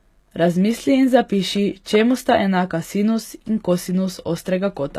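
Speech, with plainly audible codec damage throughout: the upper frequencies sound synthetic, and s sounds come out gritty and lispy. The likely cause is HE-AAC compression at a low bitrate, around 24 kbps, where the treble is rebuilt from copied lower bands rather than coded directly.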